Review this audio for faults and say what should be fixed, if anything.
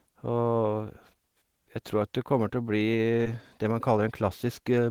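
Short concealed packet loss at 3.23 to 3.27 s: roughly 20 ms of the speech stream never reached the decoder in time, so the receiver patched the gap with about 17 ms of synthesised sound, extending the preceding audio's pitch or shaping noise to match it, before blending back into the real signal. The result is a brief smear or wobble in the speech at that point. To prevent it, strengthen the transport with a larger adaptive jitter buffer and forward error correction so late or dropped packets can be recovered rather than concealed.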